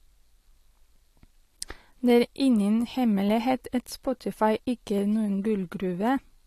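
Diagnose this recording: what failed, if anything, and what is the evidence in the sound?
Three single sharp clicks cut through the speech at 2.10 s, at 3.78 s just after "ingen hemmelighet", and at 4.98 s just before "er noen". Each is one instant, a thin vertical line across the spectrum. No sound goes missing around them. That pattern marks dropped samples: a tiny fraction of a millisecond vanishes, and the waveform jumps straight to a later value. The failing stage is likely the driver or buffer handling.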